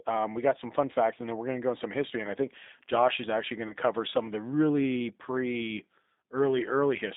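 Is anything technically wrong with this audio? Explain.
Yes, two things. The whole clip has been through the G.729 codec at 8 kbit/s. It rebuilds the speech from a filter model plus a few pulses per frame, so it sounds rough and slightly synthetic, with nothing much outside roughly 200 Hz to 3.7 kHz.

Then, from about 3.68 to 3.74 s, right after "is actually going", there's a VoIP packet loss concealed by the speech codec. Roughly 20 ms of audio never arrived, which fits a single lost packet. The decoder stretched its last frame into a brief buzzy or noisy, fading smear, and the sound takes a moment to recover before "cover some of the".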